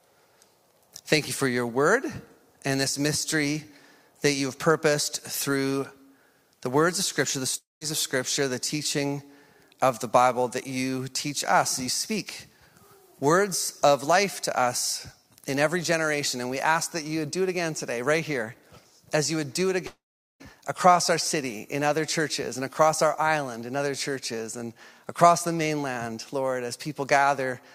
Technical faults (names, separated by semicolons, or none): long network dropout